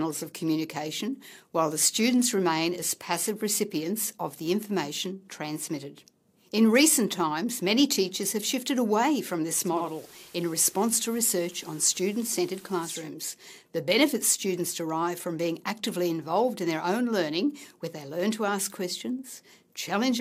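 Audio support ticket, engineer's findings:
Hiss rises at 9.64 s, sits around 25 dB below programme, gone by 13.11 s; level unchanged. Digital radio blending to analogue: receiver lost the digital signal, cross-faded over 357 ms to the station's FM broadcast, later blended back.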